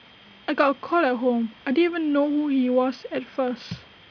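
No technical faults can be heard anywhere in the recording.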